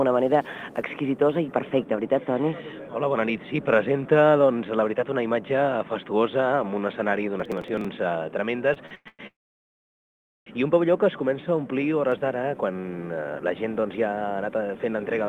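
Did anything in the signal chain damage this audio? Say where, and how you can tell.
Yes. From 7.40 to 7.85 s there is a burst of gritty crackle, pointing to the driver or buffer stage: processor overload crackle. Around twenty buffers of roughly 5 ms were each skipped outright, leaving hard-edged gaps. Unlike a network stall, nothing drags or stretches; the sound tears.

From 8.74 to 9.21 s the audio stutters through four repeated stalls (stutter), the longest 113 ms, with 291 ms filled in all. The jitter buffer kept running dry and the receiver extended the last sound each time. Nothing is lost, so it drags rather than crackles.

From 9.27 to 10.48 s comes a call audio freeze. The last sound hangs briefly, then about 1.1 s of near-silence follows before the audio resumes exactly where it stopped, 1.2 s late with nothing missing. This is likely a network hold-up emptying the jitter buffer, one long wait rather than repeated short ones.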